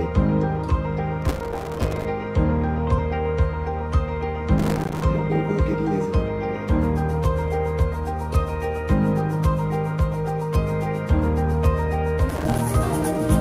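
Three bursts of processor overload crackle show up, from 1.22 to 2.05 s, 4.58 to 5.03 s and 12.29 to 12.61 s. In each, the processor keeps missing its deadlines, so tiny buffers of roughly 3 ms drop out as silence, with hard edges on either side. Stacked up like that, the dropouts turn into a gritty crackling tear laid over the sound, and it clears once the load eases.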